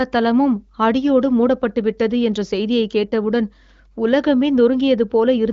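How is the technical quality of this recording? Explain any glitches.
No glitches stand out in this speech recording, which has the band-limited sound of the AMR wideband (HD Voice) codec running at one of its higher rates, with nothing above about 7.4 kHz.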